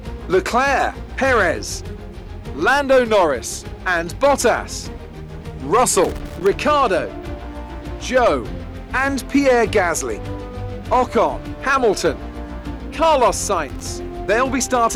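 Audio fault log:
6.04–6.47 s and 13.69–13.83 s, loose connector crackle: a worn or dirty contact in the signal path intermittently makes and breaks as it shifts, chopping the audio, heard as an irregular scratchy burst lasting about 0.42 s, then a shorter 0.14 s burst.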